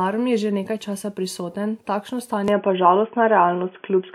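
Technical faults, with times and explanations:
2.48 s to the end, input switched to a poorer device: from 2.48 s the speech abruptly turns dull and boxy, with nothing above 3.4 kHz, a level shift of about 5 dB and a new, faint noise floor roughly 45 dB below the speech. There is no gap at the change. The likely cause is the system moving to a narrower-band microphone or headset call profile mid-recording. A spectrogram shows the upper band cut off sharply at 2.48 s, and the waveform's envelope steps in height there.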